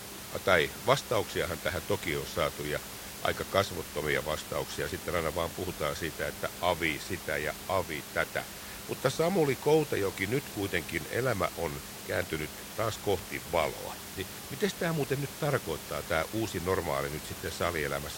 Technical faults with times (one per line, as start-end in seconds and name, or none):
none